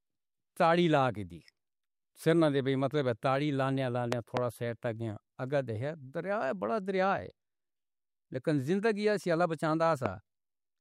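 Speech with two loud pop events. Between 4.13 and 4.39 s a pair of sharp pops rises about 20 dB above the speech, and from 10.06 to 10.08 s a single pop peaks about 15 dB above it. The speech continues underneath each one. A sudden voltage step or pulse, likely from a plug, switch, static discharge or driver glitch, was added to the signal, and the following circuitry shaped it into a brief thump.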